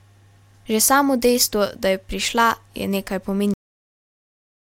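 At 3.54 s the recording has a cut-off end: the final stretch of audio was never written out or played, so the stream simply stops partway through a sound rather than being allowed to finish. The speech breaks off abruptly, with no natural decay or fade, and drops straight to digital silence. That dead silence fills the remaining time, roughly 1.1 s, through to the end of the clip.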